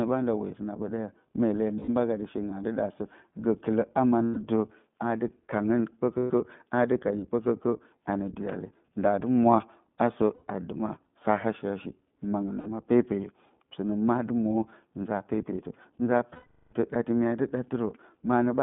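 The whole speech clip runs through the iLBC codec, squeezed into a narrow line band of roughly 150 Hz to 3.5 kHz. Each 20 ms frame is coded on its own, and at this rate the result is plainly rough and a bit synthetic, consistent with iLBC's 15.2 kbps mode.

Lost iLBC frames break in at 1.78 s, 4.25 s, 6.18 s, 10.34 s and 12.60 s, for 60 to 120 ms each. At 16.34 s there is a longer 0.4 s loss. Each gap is filled with a repeated, slightly buzzy held vowel that fades on the long one, then snaps back clean.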